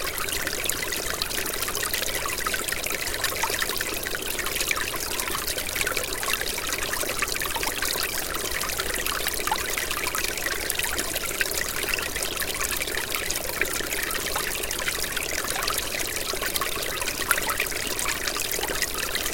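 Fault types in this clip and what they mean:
Dropped buffer (overrun): The sound jumps forward twice, at 2.16 s and at 5.8 s, with no gap between the joined pieces. A short stretch of audio is simply missing each time, around 10 ms at the first point and around 30 ms at the second. The likely cause is that the program did not collect its input samples before the hardware wrote over them, so those samples were lost and the two sides were joined directly.
Block of digital silence: At 18.34 s the sound drops out for a fraction under 2 ms and returns at once. It cuts out and back with no fade, so the edges are abrupt. A hole this short is heard as a tick or dip, not as silence. A block of zeros like this comes from the program not filling the output buffer in time or from a calculation producing invalid values.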